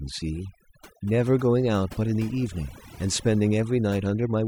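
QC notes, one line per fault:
Throughout: overdone noise removal. A noise reduction stage set far too aggressively keeps pulling individual frequency bands down or shut whenever they sit close to its noise estimate, so the background drops to near silence flecked with twinkling specks, and quieter parts of the speech are stripped away. Unlike a plain low-pass or band-limit, the loss flickers band by band rather than cutting a fixed range.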